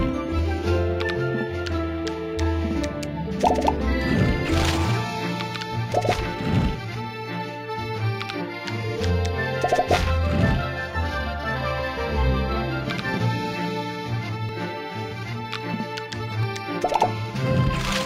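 At 0.39, 5.92, 14.49 and 16.43 s the sound skips ahead. There is no gap of silence. Roughly 10 to 30 ms goes missing each time, most at 5.92 s. A dropped buffer (overrun) is the likely cause, with samples overwritten before being read.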